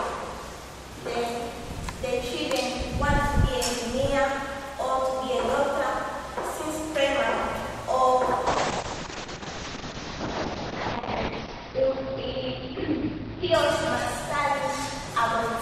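A call bitrate drop begins at 8.48 s and runs to the end of the clip. The call's bandwidth estimate collapsed, so the encoder was pushed from 128 kbps down to 6 kbps, holding that floor for about 2.55 s. At such a low rate the Opus coder quantises far more coarsely and narrows the audio band from 20 kHz to 6 kHz, so the sound turns muffled and rough, with a watery, smeared texture that never recovers before the clip ends.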